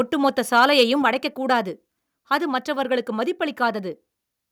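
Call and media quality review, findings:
Harsh crackle on loud syllables, 0.57–0.83 s, peaks about 3 dB over. Likely microphone overload: input gain too hot, so around one percent of samples get their tops clipped.

Sudden level drop of about 4 dB at 1.02 s, speech and background together, right after the distortion. Likely microphone volume stepped down by the call software reacting to the clipping.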